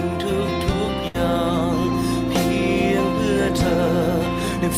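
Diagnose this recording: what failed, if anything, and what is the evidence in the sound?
Network trouble: a burst of packet loss from about 1.07 to 1.16 s. The receiver papered over it by stretching the last sound for around 67 ms, fading it down as it went, then jumped back in with roughly 60 ms of audio simply gone.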